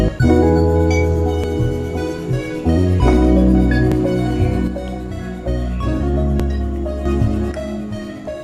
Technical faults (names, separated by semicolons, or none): audio missing between chunks; one channel drops out